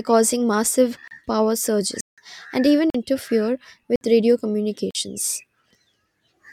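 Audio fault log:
1.08–1.11 s, 2.01–2.18 s, 2.90–2.94 s, 3.96–4.01 s, 4.91–4.95 s: blocks of digital silence. The sound drops abruptly to silence and back, after "causing massive", then after "causing massive power" (the longest, about 170 ms), then after "and even". Lengths of 33 to 170 ms, some fitting a 2048-sample buffer, point to missed output buffers.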